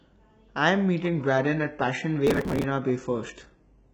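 At 1.00 s the sound quality drops abruptly, with no gap, and stays degraded to the end. This is an adaptive stream at a lower bitrate: the stream switched to a much leaner encoding when the connection slowed. Codec artefacts rise. That character fits a switch from full-band AAC to a very low-rate HE-AAC stream. On a spectrogram the upper band goes smeared and patchy from 1.00 s onward, with visibly coarser detail.

From 2.27 s to 2.64 s, within that degraded stretch, a burst of processor overload crackle rides over the speech. The processor was missing its audio deadlines one after another, and each missed buffer was simply skipped. Dozens of tiny hard-edged gaps result, which fits buffers of only a few milliseconds. The sound is a gritty, tearing crackle that stops once the load passes. On the waveform the region shows dense discontinuities and jagged edges, and the spectrogram shows thin vertical broadband streaks packed together.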